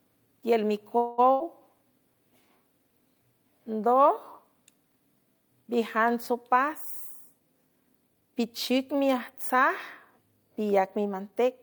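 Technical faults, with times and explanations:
0.97 to 1.20 s, call audio freeze: the sound stalls and the last bit is stretched into a fading buzz or hiss for roughly 0.2 s, then carries on from where it stopped. Nothing's lost, it's just pushed later, which likely means packets got held up and the jitter buffer ran dry.
1.32 to 1.42 s, burst of packet loss: about 80 ms of audio simply goes missing. The receiver patches the hole by holding the previous sound and letting it fade, then jumps ahead, so you hear a brief held buzz or fading hiss followed by a small skip forward.
7.33 to 9.62 s, jitter buffer speed-up: the speech runs about 7% fast with no change in pitch, so it comes across as slightly hurried. The buffer was over-full and trimmed tiny pitch-period slices over and over, shaving roughly 150 ms in total to pull the delay back down.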